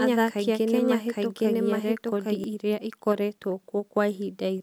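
From the start until 2.44 s, a doubled audio track: a copy at roughly equal level trails about 0.7 s behind, likely from a second, slower capture path. It sounds like overlapping repetition without room decay and stops abruptly. Spectrograms show full-band patterns repeated at a fixed offset.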